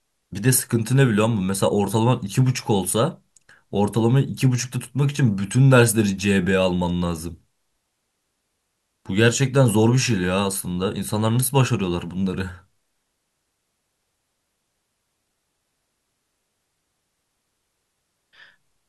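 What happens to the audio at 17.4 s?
Nothing goes wrong at 17.4 s; the speech runs on intact through that moment with no dropout, click or distortion.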